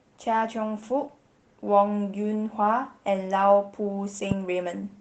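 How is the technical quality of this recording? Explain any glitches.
The recording has two audible problems: constant compression damage and a single pop near the end.

Throughout, the speech sounds muffled, hoarse and a little robotic. This is Opus voice compression at a low rate, consistent with about 16 kbps in hybrid mode. A linear-prediction coder handles the band below 8 kHz, a transform layer thinly covers the band above, and the excitation is coded coarsely.

From 4.31 to 4.34 s, a loud pop, about 10 dB above the speech, cuts sharply across the sound, which continues underneath. It was likely caused by a sudden voltage step from a plug, switch, static or driver glitch, which the following circuitry shaped into one brief pulse.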